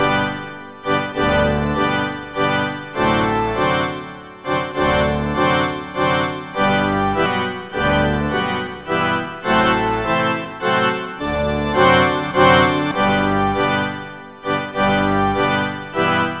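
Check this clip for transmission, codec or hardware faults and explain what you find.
One fault stands out: a jitter buffer speed-up from 11.06 to 11.47 s. The buffer had built up too much delay. The receiver trimmed short pitch-period chunks, about 70 ms in total. The sound plays about 15% fast, at unchanged pitch, and feels briefly rushed. Throughout, nothing is heard above 4 kHz, which fits a narrowband G.711 call codec.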